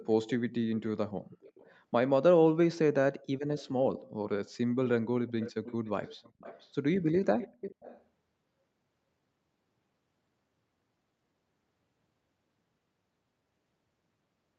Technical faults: dropped buffer (overrun); echo leak

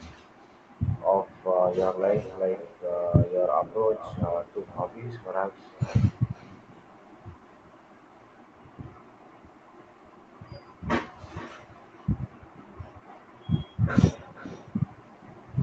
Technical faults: echo with no canceller

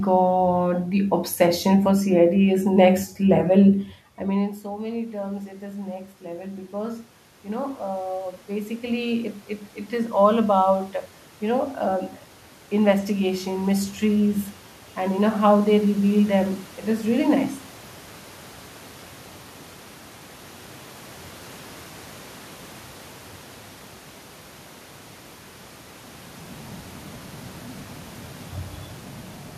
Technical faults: automatic gain rising

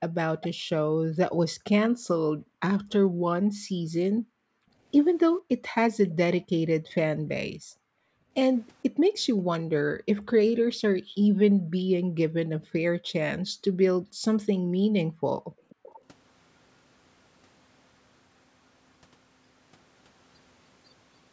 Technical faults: echo leak; background gated by the echo canceller

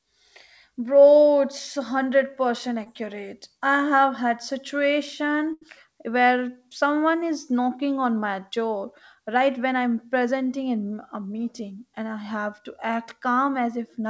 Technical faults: short concealed packet loss; burst of packet loss

